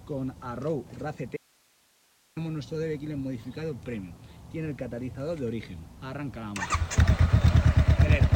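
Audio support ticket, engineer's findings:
Audio dropout to a faint residue, 1.37 s to 2.37 s. Signal cuts out abruptly for about 1 s; only hiss remains, roughly 40 dB below normal level. Return equally sudden. Likely an upstream break (cable, connector or source link) while the downstream input and preamp stayed live, passing their own noise floor.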